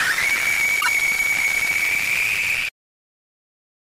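From 0.77 to 0.88 s, damaged data in the compressed stream makes the decoder misread frames and lose sync, producing a brief chirp, squawk, click or short hole.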